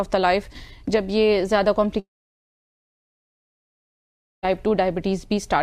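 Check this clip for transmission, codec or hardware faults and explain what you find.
One fault is present. Long network dropout, 1.99 to 4.45 s: audio likely stopped arriving; the last sound fades as a buzz or hiss into silence, and about 2.4 s is lost.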